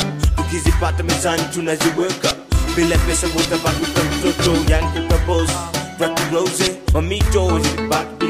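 At 3.78, 5.48 and 6.94 s, compressed frames are skipped: whole frames never reach the output, so the audio jumps ahead by roughly 150, 70 and 100 ms, which fits frames of about 26 ms.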